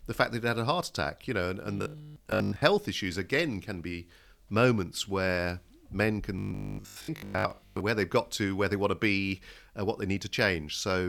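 Speech turns into a rigid, metallic 50 Hz buzz from 1.78 to 2.62 s and 6.39 to 7.81 s, robotic sound likely from repeating a 20 ms buffer that replaces most of the real audio.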